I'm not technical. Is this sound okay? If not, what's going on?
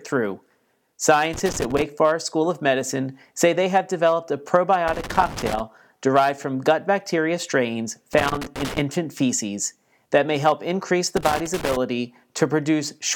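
No. Loose connector crackle, the scratchy bursts of a worn or dirty plug contact, cuts the speech at 1.33–1.82 s, after "they have developed a" (4.88–5.60 s), after "from gut bacteria strains" (8.14–8.78 s), and after "that may help increase" (11.17–11.77 s).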